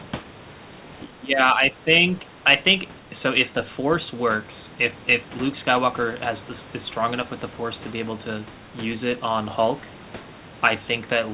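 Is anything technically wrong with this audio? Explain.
Yes. From 1.05 to 1.89 s the speech dips by up to about 15 dB for most of that span, likely speech suppressed in double talk, as an echo canceller mistook this side's speech overlapping the far-end sound for echo. Unlike packet loss, the level is pulled down. The 4 kHz ceiling comes from the G.711 mu-law call path.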